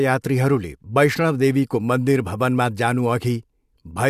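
Nothing here calls for comment, since no faults turn up anywhere across the speech.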